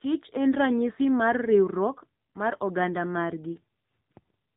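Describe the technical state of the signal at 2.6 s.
At 2.6 s the speech is carrying AMR narrowband mobile codec damage, which runs through the whole clip rather than starting here. Nothing above 4 kHz survives, and the voice has the buzzy, synthetic edge of a vocal-tract model rebuilt from 2 to 10 pulses in each 5 ms, which fits a low mode around 7.4 kbps. A simple low-pass filter would only dull the sound. This adds a coded, artificial texture on top of the missing top end.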